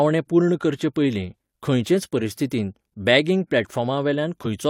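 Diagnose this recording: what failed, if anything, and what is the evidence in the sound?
Compressed frames skipped at about 4.42 to 4.46 s, near the end of the speech: a failure at the codec stage, where the decoder never plays a stretch of frames. Around 40 ms of audio goes missing, so the sound jumps forward rather than pausing. That jump is the audible evidence of the skipped frames.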